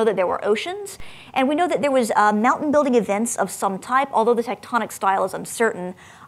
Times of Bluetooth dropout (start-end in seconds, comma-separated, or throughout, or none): none